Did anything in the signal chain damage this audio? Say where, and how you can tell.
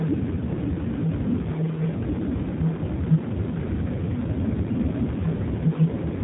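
Yes. Throughout, the speech sounds plainly rough and faintly synthetic, with nothing above 3.8 kHz. This is the G.729 codec, damaging the audio at the codec stage. Each 10 ms frame is rebuilt from a vocal tract filter, a pitch predictor and sparse pulses, which fits an 8 kbit/s G.729A stream.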